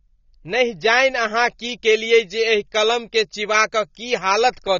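A speech recording that has most likely been through a low-bitrate AAC-LC encoder, consistent with something near 24 kbps. At that rate the encoder runs out of bits, drops everything above about 6.9 kHz and coarsely quantises what remains. That AAC compression is plainly audible across the whole clip as a dull, band-limited sound with smeared consonants and a swirly, fizzy texture on sibilants and sustained vowels. From 1.50 s to the end, pre-emphasis was left on. A treble boost consistent with the 50 µs FM curve was applied without the matching de-emphasis, lifting the top end by about 11 dB at 10 kHz relative to 1 kHz. Because of the codec's cut-off, the lift shows up in the upper range that remains, and the speech turns thin, bright and hissy, with sibilants pushed forward.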